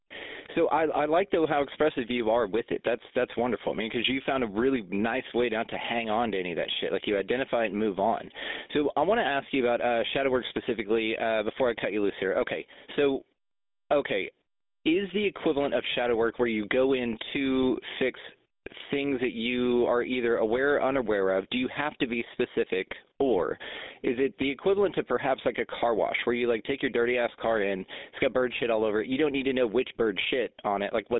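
Gain pumping runs through the whole recording, with the level swinging by something like 10 dB. Quiet and loud passages sit unnaturally close together, so the whole thing sounds squashed. The likely cause is the input gain being set far too high, with a fast limiter or compressor clamping down every time the speech gets loud.

Also present from start to finish is the GSM full-rate codec. The sound is confined to a narrow telephone band of roughly 200 Hz to 3.7 kHz, and the codec damage is plainly audible as a buzzy, gravelly roughness on the speech, which fits a 13 kbps GSM full-rate stream. That codec rebuilds speech from a vocal-tract model driven by a thinned-out pulse train, and that coarse excitation produces the grainy texture. The call microphone processing upstream of the codec is working normally; its high-pass filter takes out the lowest bass, which is expected and not a fault.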